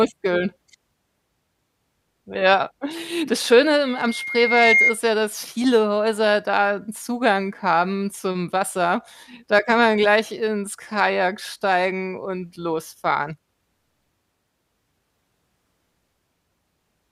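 Speech clip with a loudspeaker feedback squeal, 3.85–4.98 s, ending just before "ja dass viele": the microphone re-amplifies its own loudspeaker, so a 2.1 kHz tone swells over roughly a second to about 5 dB above the speech. On a spectrogram it is a single bright horizontal line; on the waveform, a growing envelope.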